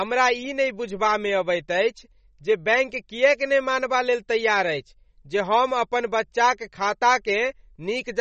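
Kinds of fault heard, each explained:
MP3 compression: watery, swirly speech with no content above 8.3 kHz, a hard spectrogram ceiling with flickering holes, likely from a low bitrate around 32 kbps.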